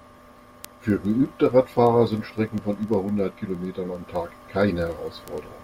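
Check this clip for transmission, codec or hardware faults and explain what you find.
There's one hardware fault: word clock ticks from 0.14 to 5.63 s, a steady run of sharp ticks about every 50 ms under the speech. The receiver's clock isn't locked to the sender's, roughly 400 ppm off, so a single sample slips each time they drift past each other.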